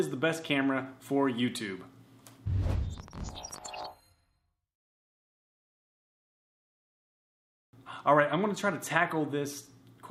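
From 2.98 to 3.86 s a train of clicks cuts across the sound, about fifteen similar pops at around 18.3 per second, unevenly spaced, peaking roughly level with the surrounding audio. The likely cause is an external pulse source, such as interference from nearby equipment or a faulty connection or power supply. On a waveform they show as narrow, repeated spikes. A spectrogram shows a row of thin vertical broadband lines at irregular intervals.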